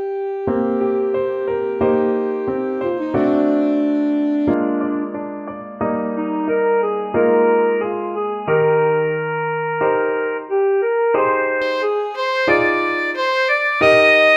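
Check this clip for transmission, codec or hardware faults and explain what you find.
One fault stands out, from 4.54 s to 11.62 s: the capture likely switched to a poorer input device, a narrower-band microphone or headset path. Nothing above 3 kHz gets through, so the sound turns dull and boxy, with a faint new noise floor, then clears abruptly at 11.62 s. There is no gap at either switch and no obvious level change.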